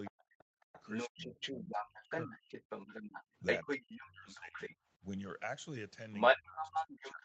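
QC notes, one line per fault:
0.05–4.76 s and 6.12–7.25 s, other side's voice leaking through: a second voice sits about 5 dB, then about 10 dB, above the talker. Loudspeaker echo the canceller likely missed.
0.10–2.68 s, 3.63–4.60 s, 5.00–5.04 s and 6.36–7.25 s, speech suppressed in double talk: the talker dips by up to about 40, 25, 15 and 25 dB. This is likely the canceller ducking both voices during overlap.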